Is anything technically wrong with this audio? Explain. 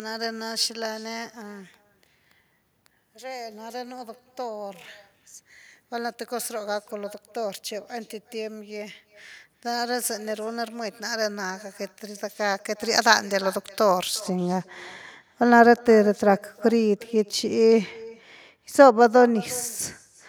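Yes. An echo with no canceller runs throughout: the far end's loudspeaker feeds its microphone, returning a thin copy about 23 dB down, roughly 0.4 s late. It is a discrete delayed repeat, not diffuse room reverb.

Pre-emphasis left on, from 0.0 to 14.20 s: the treble boost was never undone, leaving 10 kHz about 11 dB above 1 kHz. The sound is bright and sibilant, then abruptly normal in tone afterwards, unlike a sustained EQ choice.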